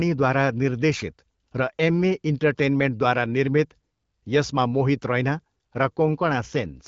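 No faults are audible in this speech; it runs over an AMR wideband (HD Voice) link at 12.65 kbit/s, where speech stays clear with only the light coloration that codec leaves at that rate.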